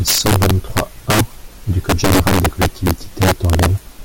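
Integer overflow runs throughout this speech clip. The level is pushed about 7 dB past full scale, and a few percent of samples exceed the integer limit. Instead of clamping, they wrap to the opposite extreme, so loud peaks turn into violent cracks, far harsher than ordinary clipping.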